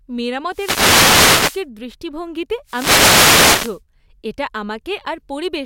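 Around 0.49 s there is a wireless microphone noise hit lasting until 1.66 s, and a second one runs from 2.65 to 3.81 s. Both sound like a swell of hissy static washing over the voice for a bit over a second. What's happening is the FM radio link fading as reflected signals cancel the direct one, so the receiver's own noise climbs up under the audio until the signal recovers.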